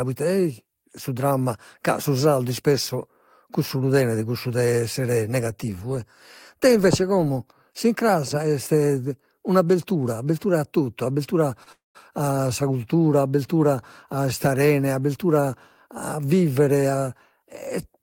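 Right after "abbertura a totu abbertura", at about 11.63 s, there's a short stall from a late packet. The receiver stretches the last sound for roughly 28 ms while it waits, so it hangs a touch too long with a slight buzz or dip. Then the audio picks up exactly where it left off, with nothing lost.

Immediately after, from 11.72 to 11.97 s, comes a call audio freeze, likely from packets held up in transit that ran the jitter buffer dry. The held sound fades quickly into about 170 ms of silence, adding a quarter-second gap before "a sa cultura" resumes intact.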